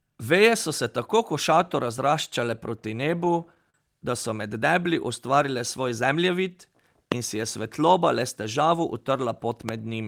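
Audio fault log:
3.11–3.75 s, repeated stalls (stutter): Just after "tako košato razraščale proti", packets arrived late five times. The receiver stretched the last sound over each gap, 75 ms in total and 40 ms at most. The speech drags and stutters without losing anything.
7.12–7.14 s and 9.69–9.71 s, loud pop: Two sharp pops sit on top of the continuing speech, about 20 dB and about 15 dB above it. A sudden voltage step, likely from a plug, switch or static, was added to the signal.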